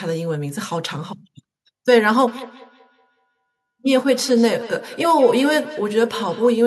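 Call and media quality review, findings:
Speech returns as a trailing repeat roughly a fifth of a second behind itself, peaking about 16 dB under the direct speech, 2.28–6.63 s. Feedback echo between two devices: a second device in the room replays this microphone's feed, which this microphone picks up again.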